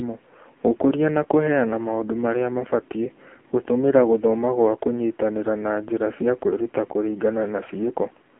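All the way through, the speech comes through the AMR narrowband mobile codec at a low rate that fits 6.7 kbps. Band runs 250 Hz to 3.4 kHz, nothing above 3.5 kHz, and the sparse pulse-driven vocal model leaves everything heavily buzzy and synthetic.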